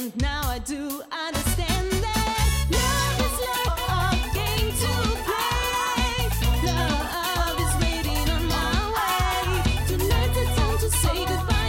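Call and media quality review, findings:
No audible faults found in this recording.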